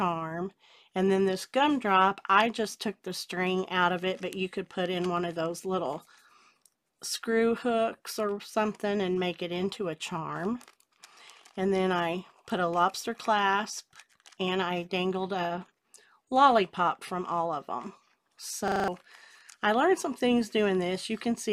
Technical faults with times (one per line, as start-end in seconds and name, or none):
18.68-18.88 system hang loop